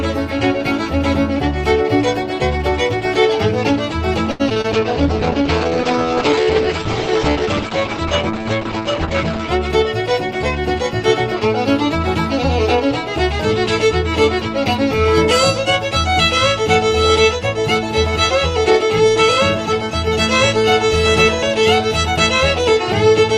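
Right at 4.31 s, through to 4.66 s, there's a burst of repeated packet loss, which gives it that robotic sound. Four holes land close together, the longest about 81 ms. Each one gets patched by stretching out the last bit of sound, so about a third of that stretch is filler and it comes out choppy.

Straight after, from 4.73 to 9.57 s, you get a call bitrate drop. The top end stops around 8 kHz, down from a full 20 kHz, and everything goes coarse and watery. That fits the encoder being squeezed from roughly 32 kbps down to about 9 kbps.

Then between 9.68 and 10.41 s the jitter buffer speeds up. It had piled up too much delay, so it trims small pitch-sized pieces, around 70 ms in all. The audio runs about 7% fast at the same pitch and feels a bit hurried.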